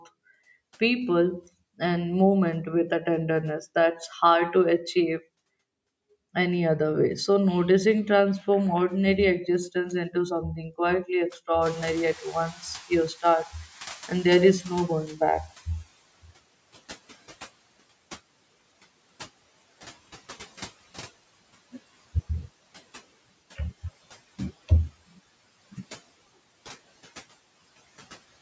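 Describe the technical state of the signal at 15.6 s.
At 15.6 s the noise suppressor is still catching up (11.61 to 15.87 s, after "existence into something quietly"). The room noise jumped about 21 dB and is now sinking gradually, about 15 dB over 4.3 s, unlike a gate's abrupt switching.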